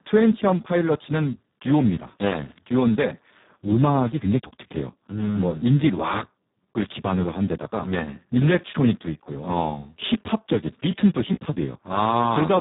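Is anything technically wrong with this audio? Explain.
Yes. The whole clip of speech carries heavy Speex codec damage. Speex is a CELP coder that rebuilds speech from a predicted filter plus a coded excitation. Here the damage is heavy enough to point to a very low setting, near 4 kbps, where the excitation is starved of bits. The result sounds hoarse and noisy. Nothing is present above 3.8 kHz, so a spectrogram shows a hard ceiling there, with smeared, blurred harmonics below it.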